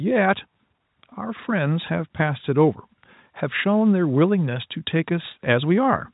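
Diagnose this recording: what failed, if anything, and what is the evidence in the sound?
Nothing has failed here: the speech comes over as ordinary G.711 telephone audio, with the band topping out around 4 kHz as the format dictates, and nothing in the sound points to a stage that went wrong.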